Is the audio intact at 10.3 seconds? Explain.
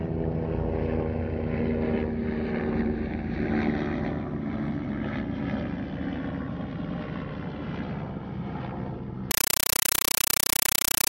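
No. From 9.31 s to the end at 11.12 s, the sound is replaced by very loud, chattering static, an 8 ms noise burst repeating 31.25 times a second. This is a compressed stream played as audio: a Dolby Digital (AC-3) bitstream treated as ordinary samples rather than decoded.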